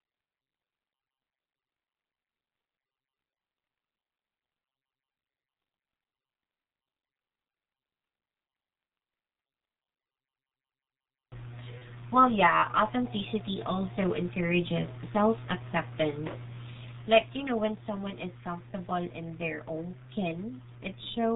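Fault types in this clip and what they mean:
G.723.1 codec: The whole clip has that early internet-phone sound, with nothing above 4 kHz, so the speech comes across muffled and hoarse, and consonants smear together. The codec works in 30 ms chunks and its model of the voice catches up slowly, so rapid changes get blurred. The damage here is heavy, and the muffled, hoarse quality points to a bitrate of around 6 kbit/s.
VoIP packet loss concealed by the speech codec: At about 11.78 s, roughly 30 ms of audio went missing, which fits a single lost codec frame. The decoder filled the gap by repeating its last pitch and filter settings while turning the level down, so you get a short stretched patch that fades instead of a clean dropout. Because each frame builds on the one before, the sound stays weak or distorted for a moment after 11.82 s.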